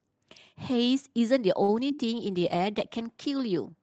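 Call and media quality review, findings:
Short stall from a late packet, 1.63 to 1.70 s. Speech held and stretched for about 50 ms, slight buzz or dip, then resumes at the same point with nothing skipped. Jitter buffer ran empty waiting on one late packet, and playout delay grew by about 50 ms. Unlike a loss, no audio is missing, only drawn out.

Short concealed packet loss, two events at 1.88 to 1.91 s and 1.95 to 2.00 s. Brief smear or wobble each time. About 20 ms of real audio never arrived, filled by extrapolating the preceding sound for roughly 10 ms and 24 ms, then crossfaded back. Unlike the stall, audio is truly gone, and short consonants can drop out.

Call bitrate drop, 2.07 to 3.26 s. Speech turns rough and watery for over a second. Congestion control cut the Opus target from 32 to 17 kbps, and the lowest rate held for about 1.1 s before recovery. Unlike the packet events, this is a sustained coding-quality loss with no gaps or stretching. 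The Opus path runs at 8 kHz audio bandwidth.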